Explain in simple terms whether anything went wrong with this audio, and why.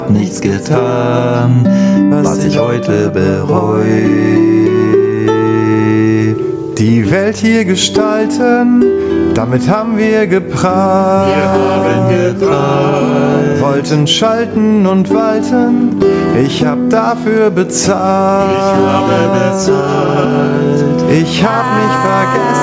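Gain pumping runs from start to finish: the level keeps swinging up and down by a large amount, with loud and soft moments pressed close together. Unlike a fade, it tracks each loud sound. The likely cause is microphone gain set far too high, with a fast limiter pulling it back.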